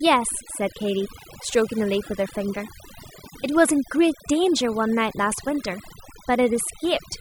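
Overdone noise removal runs through the whole clip: a noise reduction stage set too aggressively pulls individual frequency bands down or out whenever they sit near its noise estimate. The background drops and breaks up into twinkling specks, and the quieter components of the speech vanish along with it.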